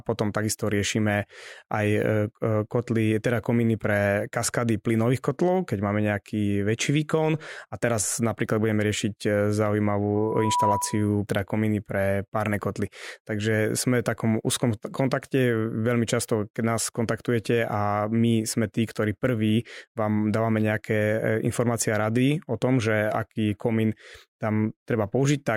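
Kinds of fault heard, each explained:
Loudspeaker feedback squeal: from 10.15 to 11.16 s, before "teda komíny pre párne", a 981 Hz tone swells within half a second to about 5 dB over the speech. The microphone hears its own loudspeaker, and at that frequency the loop gain exceeds one.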